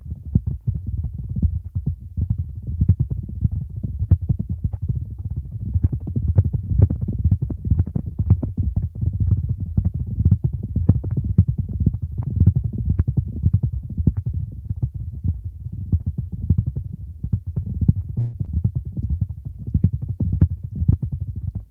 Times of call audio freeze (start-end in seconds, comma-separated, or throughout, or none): 18.19-18.35